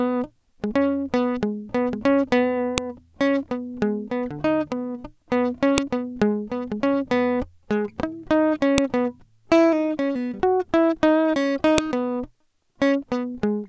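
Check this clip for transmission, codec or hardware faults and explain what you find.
Sharp, loud clicks cut through the music at 2.78, 5.78, 8.78 and 11.78 s, landing every 3.0 seconds regardless of what the music is doing. This is a file header played as audio: the stream was built from 3-second WAV pieces joined without stripping their headers, so each piece's few dozen header bytes are read as sample values. Those bytes bear no relation to the waveform, producing a brief snap at every join.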